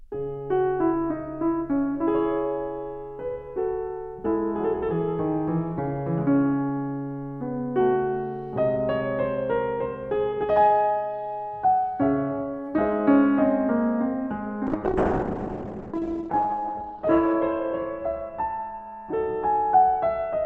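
From 14.67 s to the end, the music turns rough, watery and muffled, losing everything above 8 kHz: a call bitrate drop, cutting the encoder from 96 to 9 kbps.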